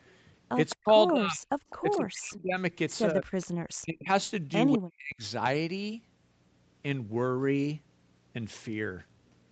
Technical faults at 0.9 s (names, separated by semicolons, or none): echo leak; speech suppressed in double talk